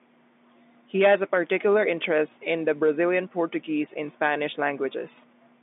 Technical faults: none

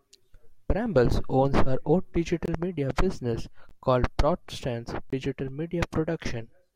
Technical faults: block of digital silence

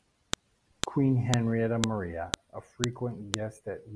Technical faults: file header played as audio

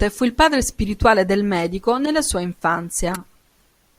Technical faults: corrupt frame decoded

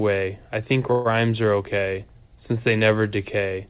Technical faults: call audio freeze

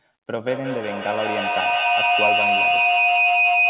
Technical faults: feedback howl

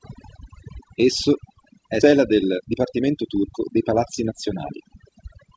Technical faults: overdone noise removal; skip ahead; jitter buffer speed-up

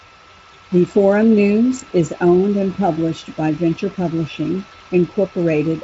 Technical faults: none

